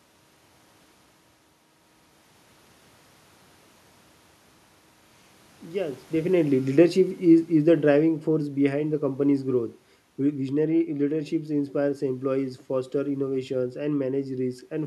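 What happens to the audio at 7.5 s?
Right around 7.5 s you're in the middle of an automatic gain falling stretch that runs from about 6.21 s to 9.75 s. The gain control decided the input was too loud or too noisy for its gain and started pulling its gain down bit by bit, by about 9 dB overall. So the speech sinks steadily, and the room noise underneath drops right along with it, which gives it away as a gain move rather than the talker shifting around near 6 s.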